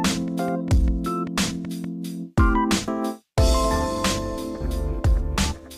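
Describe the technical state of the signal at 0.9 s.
At 0.9 s the signal sits inside a train of clicks running from 0.08 to 1.85 s: about ten similar pulses at a regular 5.1 per second, peaking a few decibels above the programme. It's heard as steady ticking, likely from interference or a faulty connection.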